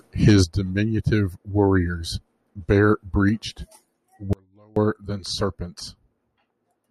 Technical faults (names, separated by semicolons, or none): audio dropout to a faint residue